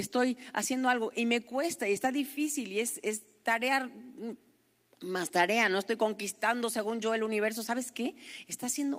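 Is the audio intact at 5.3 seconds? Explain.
Yes, the speech at 5.3 seconds is intact, with nothing there that breaks or disturbs the audio path.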